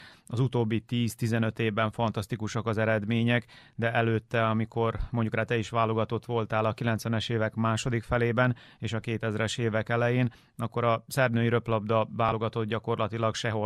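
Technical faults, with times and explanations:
12.29–12.33 s, Bluetooth stutter: right after "a szerb női röplabda", a 21 ms slice replays once as late wireless data fails to arrive, then sound resumes further on.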